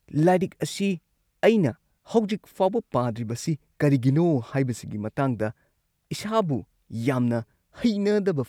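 No technical faults can be heard in this recording.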